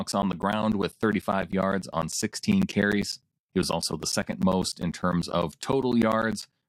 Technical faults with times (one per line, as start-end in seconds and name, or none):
0.12-6.63 periodic USB or driver dropouts